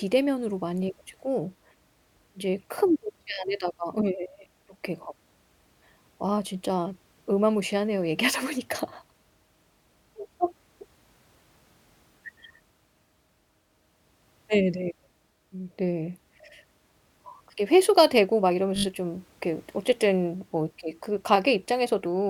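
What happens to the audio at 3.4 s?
Just before 3.4 s, from 3.33 to 3.37 s, the speech has repeated frames: the same 20 ms block of compressed audio was decoded twice more, which points to a single frame being written or delivered three times. The result is a brief stutter, and 40 ms is added to the clip. On a spectrogram, identical 20 ms slices sit side by side. In the waveform the same short cycle shape appears three times over.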